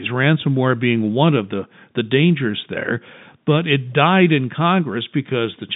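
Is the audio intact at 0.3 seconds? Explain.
Yes, at 0.3 s the audio is intact, with no fault at that moment.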